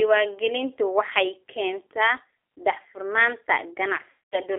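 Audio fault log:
Throughout: G.729 codec. The speech is confined to a telephone band of roughly 300 Hz to 3.6 kHz, with no air or sibilant brightness above it, and carries the plainly audible roughness of an 8 kbit/s parametric coder. Each 10 ms frame is rebuilt from a vocal tract filter, a pitch predictor and a handful of pulses, so fine detail in the waveform is lost and the voice takes on a slightly buzzy, synthetic texture.
4.10 to 4.39 s: VoIP packet loss concealed by the speech codec. Right after "waxay keentaa daahfurnaanta", about 220 ms of audio goes missing, which fits a run of eleven 20 ms packets. The decoder fills the gap by repeating its last pitch period and filter shape with falling gain, so the sound smears into a buzzy tone or coloured noise that fades. Because each frame's state depends on the previous one, the voice stays weak and distorted briefly after the packets return.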